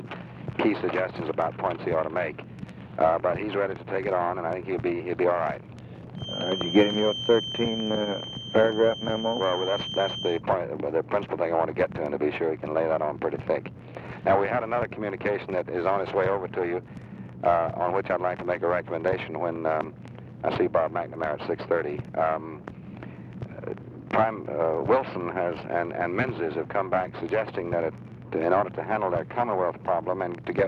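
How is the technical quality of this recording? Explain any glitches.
A single glitch stands out: a feedback whistle from 6.14 to 10.43 s. A thin, steady tone near 3.1 kHz sits behind the sound, somewhat quieter than it, and its level swells and fades slowly as it holds. The likely cause is a loudspeaker-to-microphone loop poised right at the edge of feedback. That one frequency keeps recirculating with just enough gain to sustain itself, but not enough to build into a howl, so it lingers as a whistle rather than running away.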